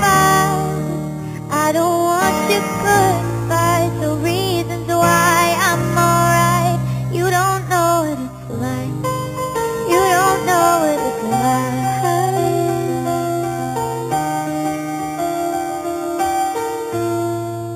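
Throughout the audio there is imaging from sample-and-hold upsampling. A bright, metallic fizz sits above the wanted band, rising and falling with the level of the sound. The lowest mirror copy occupies roughly 4 to 8 kHz, about 14 dB below the signal, and moves opposite to the pitch. This points to material at an 8 kHz rate brought up to 48 kHz by repeating each sample without an anti-imaging filter, leaving spectral mirror images around multiples of 8 kHz.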